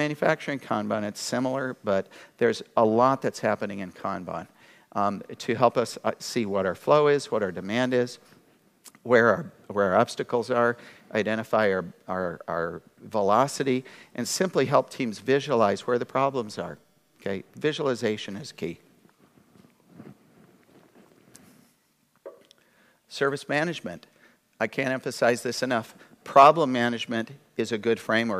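Nothing in this recording stands out as a technical problem, so there's really nothing here to point to.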